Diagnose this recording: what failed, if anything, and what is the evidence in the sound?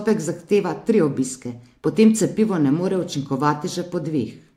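Nothing failed; no faults heard.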